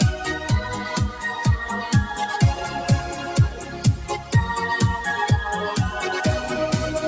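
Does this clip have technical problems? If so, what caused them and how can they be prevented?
Yes. Throughout, held sounds and tails pump and thin by roughly 5 dB while attacks pass. A speech-tuned noise suppressor applied to music or sounds mistakes steady tones for noise. From 3.53 to 3.84 s and 4.18 to 4.33 s, the sound cut by the noise suppressor dips by about 5 dB and about 6 dB respectively, with the sustained parts sinking. To prevent this, turn off noise suppression or switch to a music or original-sound mode when sending anything other than speech.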